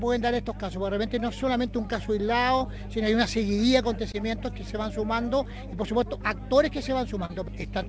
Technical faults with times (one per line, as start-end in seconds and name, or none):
0.00-7.88 mains hum
2.58-2.65 short concealed packet loss
4.12-4.15 short concealed packet loss
7.25-7.31 short concealed packet loss